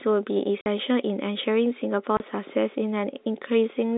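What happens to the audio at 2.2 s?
The speech drops out abruptly for a brief hole from 2.17 to 2.20 s, with a hard edge where the sound is cut off and where it resumes. This is packet loss filled with silence: about 30 ms of audio never arrived, and the receiver played silence in its place. A gap of that length fits three lost packets of 10 ms each. The hard switch to and from silence gives the hole its abrupt edges.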